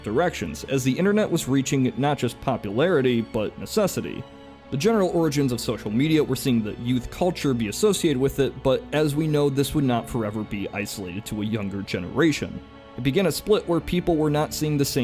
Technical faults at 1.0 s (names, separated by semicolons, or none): none